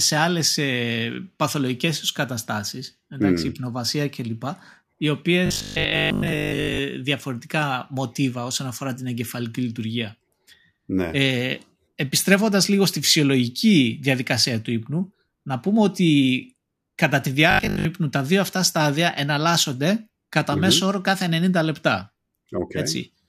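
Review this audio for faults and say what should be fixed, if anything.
Robotic sound from repeated short buffers occurs at 5.46–6.78 s and 17.51–17.85 s. The speech turns into a rigid metallic buzz at 50 Hz, likely from a 20 ms block being replayed while most new audio goes missing. Unlike codec warble, the buzz holds one fixed pitch. A larger input buffer that never runs dry prevents it.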